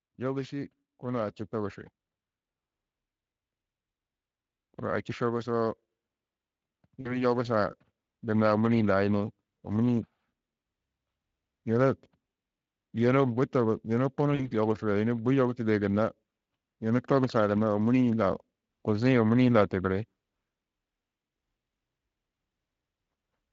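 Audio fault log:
0.5–1.82 s and 4.62–5.82 s, automatic gain rising. The level swells slowly in each span. The first rise is about 3 dB over roughly 1.3 s. The second is about 4 dB over about 1.2 s. The gain control judged the input too quiet and turned itself up step by step. Speech and background grow louder together, so the change sounds like a gradual lift rather than a jump.
7.01–7.25 s and 14.35–14.51 s, VoIP packet loss concealed by the speech codec. Each gap holds 40 ms of missing audio, which fits two lost frames. The decoder fills the hole by repeating its last pitch and spectral shape, lowering the level frame by frame. The speech smears into a brief buzzy tone or coloured noise that fades. It stays weak or distorted for a short while after the packets return, so the damage lasts well beyond 40 ms. The light Speex colouring throughout the clip points to a fairly high quality setting.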